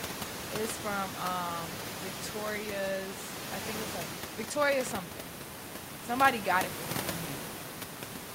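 Nothing stood out on listening to this speech recording, apart from the room's own background noise sitting about 9 dB below the talker.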